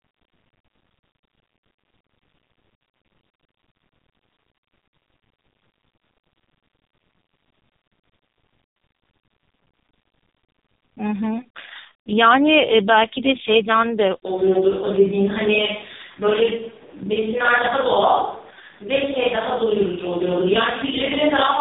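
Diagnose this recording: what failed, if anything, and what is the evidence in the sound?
The codec stage failed: AMR narrowband mobile codec damage runs through the whole speech recording. Nothing passes above 3.8 kHz, and the voice is heavily buzzy and synthetic, which fits the lowest AMR-NB mode of about 4.75 kbps, where too few pulses drive the vocal-tract model.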